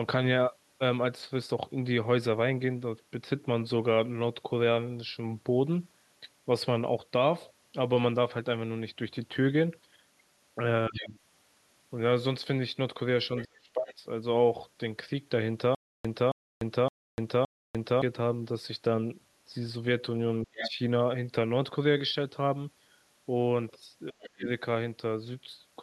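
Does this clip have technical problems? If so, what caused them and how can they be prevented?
Yes. The speech is suppressed in double talk at 10.88–11.15 s, 13.45–14.06 s, 20.44–20.78 s and 24.11–24.48 s. The talker dips by about 15 dB in the first case and drops almost out, by roughly 35 dB, in the others. The likely cause is an echo canceller that cannot separate the near talker from the loudspeaker echo and so ducks everything. Unlike a dropout, nothing repeats, and the level returns once the other side stops. Prevention: use a headset or an echo canceller with better double-talk detection.

The other side's voice leaks through at 10.96–11.07 s, 13.37–13.45 s, 13.89–13.94 s and 20.56–20.71 s. It is a second voice heard in scraps, roughly 10 to 30 dB below the talker. It most likely comes from loudspeaker sound that the echo canceller did not fully remove from the microphone. It differs from the suppression because it adds a foreign voice rather than ducking the talker, although the two events overlap here. 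Prevention: lower the loudspeaker volume or use headphones.

A stutter with silent gaps runs from 15.75 to 18.02 s. The same 0.27 s burst plays four times, every 0.57 s, with about 0.30 s of digital silence between repeats. This points to a player or stream that stalled and replayed its last fragment on each retry, and the audio due in that span is lost. The identical repeats and true dead silence set it apart from the ducking described above. Prevention: enlarge the playback buffer or fix the network stall behind it.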